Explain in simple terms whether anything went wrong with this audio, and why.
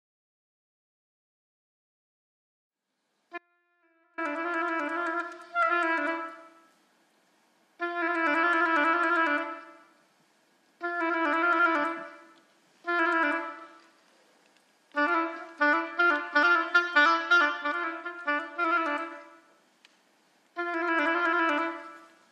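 The signal feeding the recording was likely cut off for a moment while the line stayed open, an audio dropout to a faint residue. From 3.38 to 4.18 seconds, about 0.8 s, the sound suddenly drops to a faint leftover far below normal, then snaps back.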